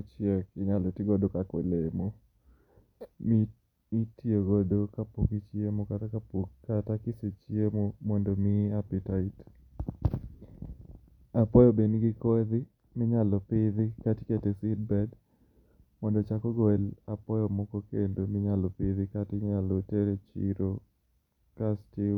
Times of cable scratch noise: none

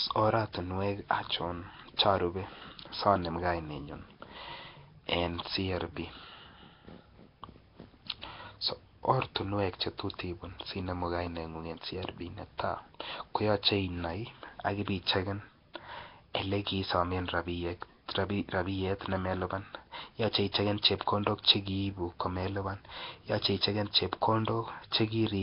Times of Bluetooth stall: none

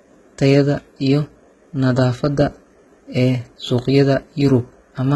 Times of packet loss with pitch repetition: none

